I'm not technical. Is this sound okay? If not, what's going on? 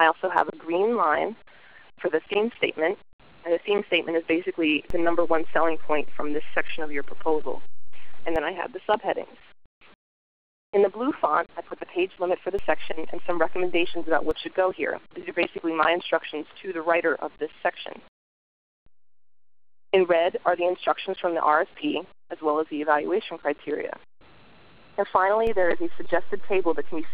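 No. There is a DC step three times: at 4.90 to 8.36 seconds, 12.59 to 14.31 seconds, and from 25.47 seconds to the end. The signal's resting level suddenly shifts, causing a low thump each time.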